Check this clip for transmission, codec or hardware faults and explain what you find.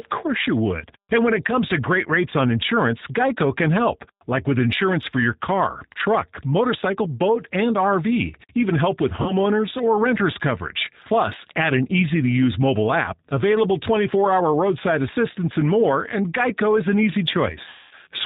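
Two things are going on: a low-rate speech codec on the whole clip, and two dropouts patched over by that codec.

G.729 codec, throughout: the speech is rebuilt from a vocal-tract filter, pitch predictor and a few pulses per frame, which fits 8 kbit/s G.729A. Nothing above 4 kHz survives, so it sounds dull, plainly rough and a bit synthetic.

VoIP packet loss concealed by the speech codec, at 9.22 to 9.33 s and 17.69 to 17.95 s: the decoder kept extrapolating its last pitch and filter while fading the gain. The first gap is about 40 ms, fitting two lost packets, so there's a brief smear of buzz or coloured noise. The second is about 220 ms and stretches into a fading buzzy tone or coloured noise. Because each frame leans on the previous one, the voice stays weak for a moment after each gap.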